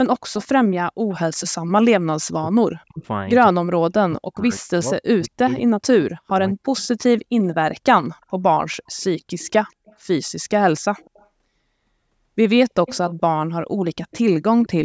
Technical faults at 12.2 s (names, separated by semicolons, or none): none